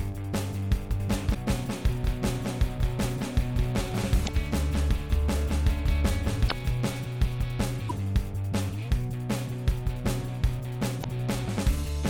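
From 1.0 s to 7.0 s the sound is doubled: a second, full-band copy trails the original by roughly a fifth of a second, about 5 dB quieter, with no decay or room colour. It switches in and out abruptly at both ends. This is a doubled audio track, likely caused by the same signal reaching the mix twice, once through a slower path, so the two copies run out of step.

Short glitches cut through the audio at 1.33 s, 4.24 s, 6.47 s, 7.86 s and 11.01 s. Each lasts a few tens of milliseconds. These come from damaged data in a compressed stream. At each point the decoder hit corrupted frames, misread them, lost sync, and jumped ahead to the next valid frame header before playback carried on.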